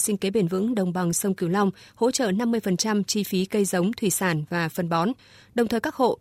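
Nothing technical goes wrong anywhere in this speech recording, so there's no fault to point to at any moment.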